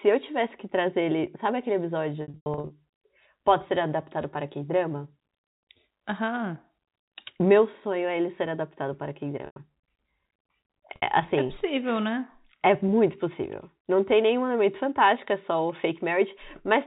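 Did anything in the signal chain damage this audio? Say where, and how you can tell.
Yes, at the network stage: packet loss with pitch repetition. Gaps totalling 320 ms are scattered between 2.22 and 2.70 s, and single gaps fall at 9.46 s (100 ms) and 10.96 s (60 ms). Each repeats the last pitch period, which shows as frozen harmonic stripes on a spectrogram and an identical, fading cycle on the waveform.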